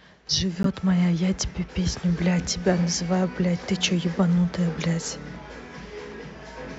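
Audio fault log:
0.63–0.67 s and 4.81–4.86 s, corrupt frame decoded: damaged compressed frames, a couple at first and a few later, were decoded despite flipped bits, so misread gains and codes put energy at wrong frequencies. The result is a loud chirp, blip or burst of noise, then a quieter one.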